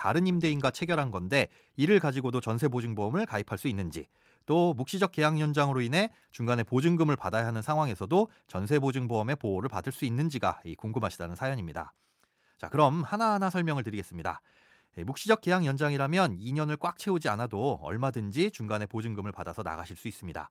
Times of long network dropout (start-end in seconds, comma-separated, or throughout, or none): none